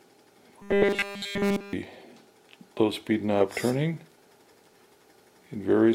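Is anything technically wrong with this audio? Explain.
Yes. From 0.62 to 1.73 s there is robotic sound from repeated short buffers, likely caused by new audio arriving too seldom so that a tiny buffer, about 5 ms long, is looped throughout and the real audio skipped. This imposes a rigid 200 Hz metallic buzz on the sound.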